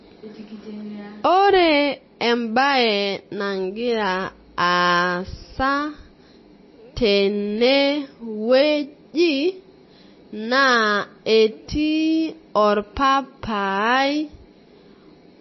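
MP3 compression damage runs through the whole speech clip, from start to finish: nothing is present above 5.8 kHz, and the remaining sound has a watery, swirling quality with smeared consonant attacks and chirpy sibilants. The likely cause is an MP3 encoder starved of bits, which fits a rate of roughly 25 kbps. Short of bits, it cut the treble at that fixed point and dropped weak frequency lines that flicker in and out between frames.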